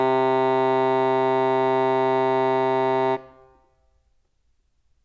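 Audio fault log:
No faults: the music signal has nothing in it that points to a problem in the recording or playback chain.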